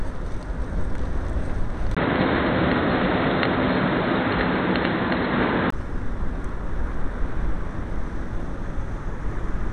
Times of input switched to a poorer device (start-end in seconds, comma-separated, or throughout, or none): 1.95-5.72